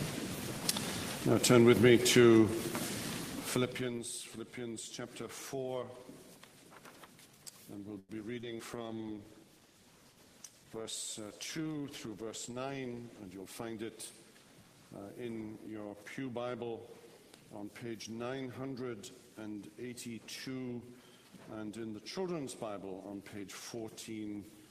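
A short stall from a late packet comes at 7.99 to 8.12 s. A packet arrived after it was due, the jitter buffer ran dry, and the receiver held the last sound for 94 ms until the data turned up, then carried on from the same point. Nothing is skipped. The sound at that moment simply hangs on too long, with a faint buzzy flattening before it moves again, and the playback lags 94 ms further behind.

Short concealed packet loss follows twice, at 8.41 to 8.46 s and at 8.59 to 8.62 s. Each time about 40 ms of audio never reached the decoder. The receiver bridged the gap by extending what it had just played and then blending back into the real signal, with 18 ms of fill the first time and only 7 ms the second. What you hear is a quick smear or wobble, and a brief sound can drop out. Because so little was filled, each gap also pulls the playback delay back in by a few hundredths of a second.

A call bitrate drop starts at 8.73 s and lasts until 14.37 s. 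The connection's estimated bandwidth fell, so the encoder was given far fewer bits. The coarser, duller sound points to a fall from around 32 kbps to about 17 kbps, with the worst stretch lasting about 3.9 s. Through this section the audio sounds rough and watery, and the top end thins out until quality returns.

A jitter buffer slow-down overlaps the start of that section, at 8.77 to 9.15 s. The buffer was running low or had just raised its target delay, so the receiver rebuilt its reserve by repeating single pitch periods and slivers of pause over and over. This added 63 ms and brought playback to 86% speed. The sound drags there at unchanged pitch, stretched out.

A jitter buffer speed-up runs from 12.26 to 13.65 s. By then the buffer held more than its target, so the receiver trimmed short pitch-period pieces again and again to reduce the delay. In total it removed about a tenth of a second. 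Playback runs at 107% speed with the pitch unchanged, and the sound comes across as slightly hurried.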